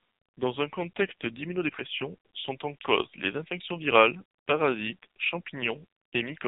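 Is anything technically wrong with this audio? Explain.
Yes. The speech has passed through an AMR narrowband mobile codec for its whole length. The codec models the vocal tract and excites it with sparse pulses every 5 ms, so heavy damage leaves the voice buzzy and synthetic, which fits a low mode around 5.9 kbps. On a spectrogram, everything stops sharply at 4 kHz.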